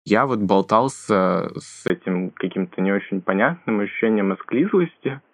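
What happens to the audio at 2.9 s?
Input switched to a poorer device, from 1.88 s to the end: after a 20 ms gap, speech turns dull and boxy, with nothing above 3.4 kHz, likely because recording moved to a narrowband microphone, adding faint new noise about 45 dB down.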